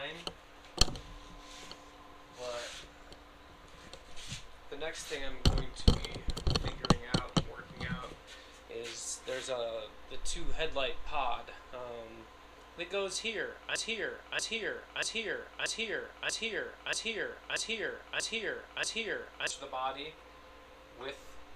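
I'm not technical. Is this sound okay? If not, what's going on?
No. There is a broken-record loop from about 13.76 to 19.5 seconds: a short stretch of sound, roughly 0.63 seconds long, plays over and over, nine times back to back, like a skipping record. What you hear is most likely the player or stream stalling and repeating the last piece it had instead of moving on. The sound that should have filled those seconds is missing.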